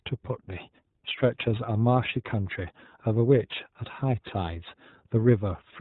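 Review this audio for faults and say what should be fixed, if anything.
The speech passed through the iLBC codec, which discards everything above 4 kHz and codes each frame independently, leaving the speech plainly rough and slightly synthetic throughout. The sound fits 30 ms frames at about 13.3 kbps. To prevent it, use a wideband codec such as Opus or G.722 instead of iLBC.

Lost iLBC frames occurred from 0.45 to 0.49 s. The decoder concealed the gap by repeating the last pitch cycle mixed with noise, creating a brief buzzy, held-vowel smear, consistent with a single lost 30 ms frame, and recovering immediately afterwards. To prevent it, reduce packet loss with a steadier network path or QoS, or add forward error correction or redundancy.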